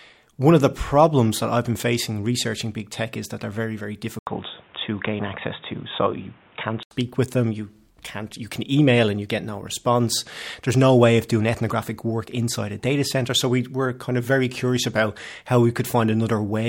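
The input likely switched to a poorer device from 4.19 to 6.91 s: after an 80 ms silence, speech dulls, losing everything above 3.8 kHz.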